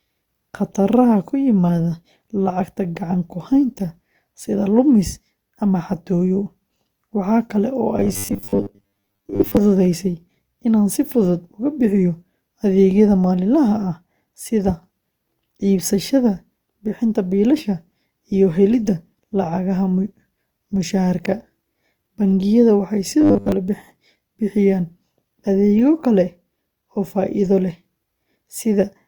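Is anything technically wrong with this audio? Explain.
Yes. Robotic sound from repeated short buffers occurs from 7.97 to 9.57 s and from 23.21 to 23.52 s, likely because audio arrived too seldom and a roughly 10 ms chunk was looped for most of that time. The speech becomes a rigid, metallic 100 Hz buzz.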